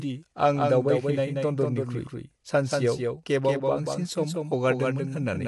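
A second capture path or an edit that holds two unaligned copies has likely mixed the speech in twice. That doubled audio track runs the whole way through: a full-band copy trails the original by about a fifth of a second, roughly 5 dB quieter, so every syllable gets a dry, flat repeat. Because the copy carries no decay or room colour, it sounds like a pasted duplicate rather than an echo off walls.

Also throughout, the speech has likely passed through low-delay AAC compression, the AAC-ELD codec common on video calls. Its short frames resolve voice harmonics poorly, and the damage is plainly audible, which fits a low bitrate around 32 kbps. The voice sounds rough and grainy, with noise filling the gaps between harmonics. Nothing is present above 11.6 kHz, so the top end is cut off and dulled.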